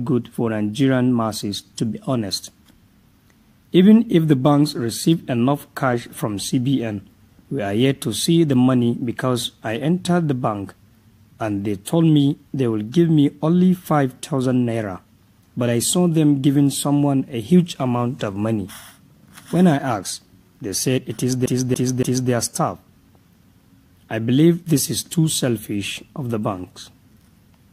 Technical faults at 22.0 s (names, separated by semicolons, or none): CD stuck on one turn